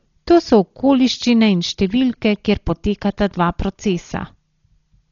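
Throughout, the speech was likely squeezed through Dolby Digital compression at a starved bitrate. Nothing remains above 7 kHz, so it sounds dull and rough, with fluttering noise.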